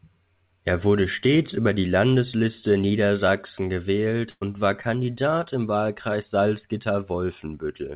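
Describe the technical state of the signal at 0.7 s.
At 0.7 s the speech is intact, with no fault present, only the band limit of the call path, where nothing reaches above 4 kHz, consistent with a G.711 mu-law connection at 64 kbps.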